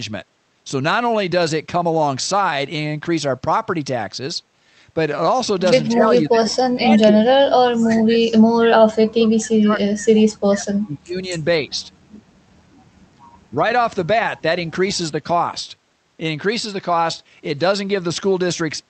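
The speech sinks deeply, by about 30 to 40 dB, at 5.89–6.91, 7.08–8.2, 8.55–8.7, 8.86–10.19 and 10.45–11.33 s, then dips only slightly at 11.59–11.92 and 13.5–13.55 s. This is likely speech suppressed in double talk: an echo canceller mistook overlapping talk for echo and attenuated it.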